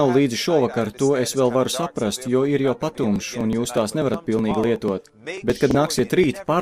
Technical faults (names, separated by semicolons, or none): periodic USB or driver dropouts; frames out of order